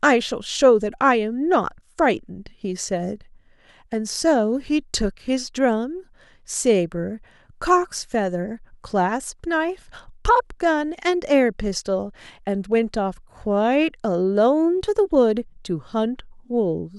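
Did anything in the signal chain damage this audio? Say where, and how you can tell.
No, nothing in this speech recording points to damage at any stage of the signal chain, and the signal holds steady and intact throughout.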